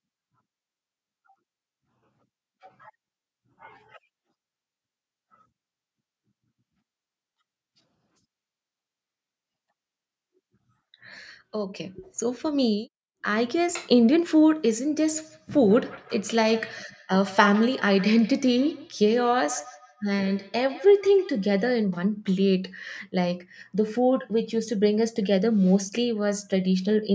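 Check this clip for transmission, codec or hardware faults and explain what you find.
One transmission fault is present: a feedback echo between two devices, from 14.96 s to 21.77 s. Across that span the speech comes back at a regular interval of roughly 150 ms, with each return thinner and more ringing than the one before. The repeats peak at about 19 dB below the speech. Two devices in the same room are on one call. One plays back what the other's microphone sent, and that microphone picks it up again. Each device's echo canceller removes only its own playback, so the loop goes uncorrected. The call's microphone processing, audible in the missing content above 8 kHz, is working as expected and is not part of the fault.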